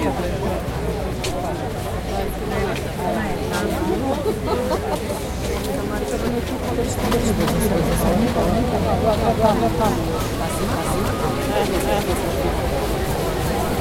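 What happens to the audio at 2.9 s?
Nothing goes wrong at 2.9 s; the sound carries on intact through that moment with no dropout, click or distortion.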